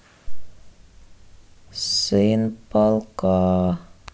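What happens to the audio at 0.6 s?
Nothing goes wrong at 0.6 s; the speech there plays through intact, with no dropout, click or distortion.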